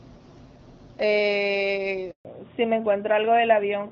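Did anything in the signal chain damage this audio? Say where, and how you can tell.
Yes. At the network stage there is a handover gap from 2.11 to 2.25 s. The speech fades out within a few tens of milliseconds and stays silent for 140 ms. No speech frames arrived while the call switched networks, so that stretch is lost.

At the codec stage, a fallback to narrowband begins at 2.25 s and lasts to the end. Before it, the AMR wideband (HD Voice) codec carries speech up to about 7 kHz with only light coding damage. Afterwards nothing is present above 4 kHz, and the speech turns duller and rougher. This fits a switch from AMR-WB at 12.65 kbit/s to AMR-NB at 12.2 kbit/s.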